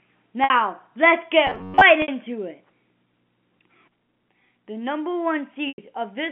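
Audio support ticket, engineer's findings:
Packet loss with pitch repetition at 0.44–0.50 s, 2.02–2.08 s and 5.68–5.78 s. Short held, buzzy tone where audio drops out, about 60 ms at the first two and 100 ms at the last. Receiver concealment repeats the last pitch period across the missing stretch. Gap lengths fit 20 ms packets, three in a row lost twice, then five. Probable component: network path or jitter buffer. Narrowband G.711 A-law line audible underneath.

Robotic sound from repeated short buffers, 1.47–1.81 s. Rigid metallic buzz at a fixed 93.8 Hz that loosely tracks the speech contour. Likely cause: the playout side starved of fresh audio and looping its last chunk of about 10.7 ms, with most of the real audio in that stretch skipped. Loop length sets the buzz pitch. Probable component: audio buffer or playout scheduling.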